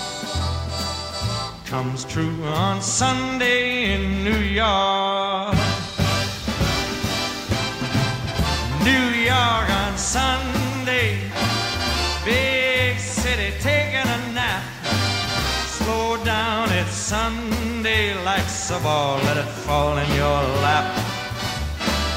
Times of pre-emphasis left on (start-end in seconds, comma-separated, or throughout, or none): none